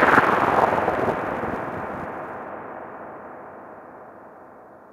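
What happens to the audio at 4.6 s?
Nothing goes wrong at 4.6 s: the sound carries on intact through that moment, with no dropout, click, glitch or distortion.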